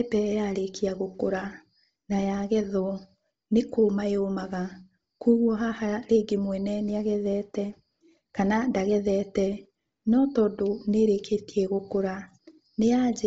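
Bluetooth LC3 compression throughout: nothing above 7.7 kHz and a breathy, grainy edge, likely heavy LC3 coding near 24 kbps noise-filling its zeroed upper spectrum.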